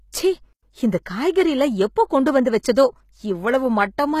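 Throughout the speech, s sounds turn gritty and metallic, with nothing above 14.9 kHz, likely HE-AAC compression at a low bitrate near 20 kbps, copying lower bands upward rather than simply dulling the treble.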